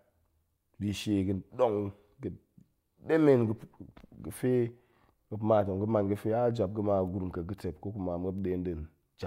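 No faults are audible anywhere in the recording; the speech runs from beginning to end without a dropout, glitch or break in the signal.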